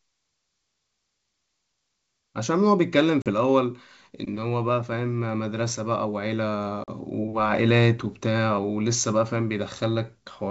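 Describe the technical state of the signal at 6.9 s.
Right at 6.9 s the speech drops into a hard-edged silent hole running from 6.84 to 6.90 s, and comes back slightly distorted before settling. This is packet loss on an ADPCM call: about 40 ms of audio, a couple of packets, went missing and were filled with silence. Because ADPCM codes only differences, the receiver's predictor and step size lost track of the sender's and needed a few tens of milliseconds to realign. The G.722 wideband coding underneath is at 64 kbit/s.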